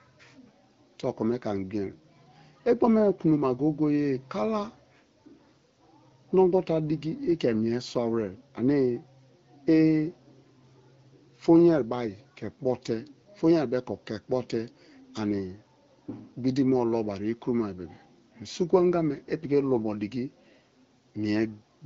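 Speech carrying a block of digital silence at 7.95 s: a hole of about 2.9 ms where the signal drops out and returns with no fade, heard as a single tick. Its abrupt edges and the missing buffer, which fits a 128-sample block, distinguish it from codec smearing, since the AMR wideband (HD Voice) coding, top band near 7.5 kHz, leaves only light artefacts.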